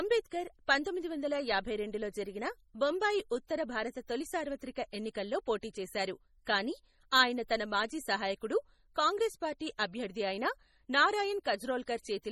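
Throughout the clip, the speech has likely passed through heavy MP3 compression. The damage fits a very low bitrate around 32 kbps. Starved of bits, the encoder discards weak frequency lines frame by frame, so detail flickers in and out and the speech takes on a watery, swirling texture. Sibilant s sounds turn chirpy and metallic, and onsets smear. Above the 18.6 kHz cut-off, nothing remains.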